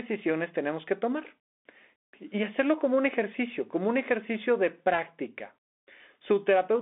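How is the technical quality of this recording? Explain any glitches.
The recording has one fault, present throughout: it has passed through a Bluetooth CVSD headset codec. For the whole clip the speech is confined to roughly 250 Hz to 3.6 kHz, with nothing above 3.8 kHz. CVSD encodes each sample as a single up-or-down bit, which fits a 64 kbps stream, and adapts its step size. Fast, loud high content outruns the step, so s sounds turn scratchy and a granular hiss sits under the speech, plainly audible. On a spectrogram, energy stops sharply near 3.8 kHz, with a grainy noise floor filling the gaps in the speech.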